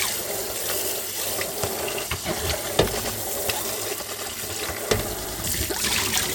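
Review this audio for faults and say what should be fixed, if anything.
Overlapping chunks: a 100 ms stretch of sound plays twice at 0.85, 1.95, 3.05, 4.15 and 5.25 s, each repeat lasting until about 100 ms later. The repeats fall every 1.1 s, which fits audio handled in 1-second chunks, each starting 100 ms before the previous one finished. At each join the tail of one chunk is replayed as the head of the next, producing a brief stutter at a steady rhythm. To prevent it, advance each chunk by its full length, or crossfade and discard the overlapping region when reassembling.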